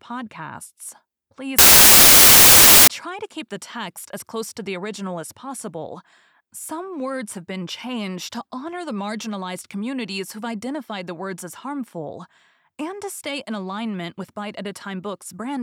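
A speech clip. From 1.59 to 2.88 s, samples built from the wrong bytes turn the audio into loud, harsh broadband noise. Misassembled bytes push low bits to the top. Speech returns at "try to keep the".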